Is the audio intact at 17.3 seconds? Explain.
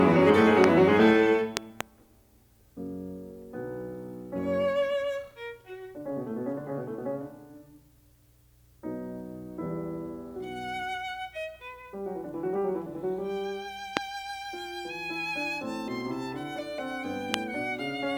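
No, not quite. There's a single loud pop right around 17.34 to 17.36 s, a sharp click that jumps out something like 25 dB above the music, while the music keeps going underneath it. That kind of sound is most likely an electrical transient, a sudden voltage step or spike from a plug, switch, static discharge or driver hiccup, landing on top of the signal and getting shaped into a short pulse by the circuitry downstream.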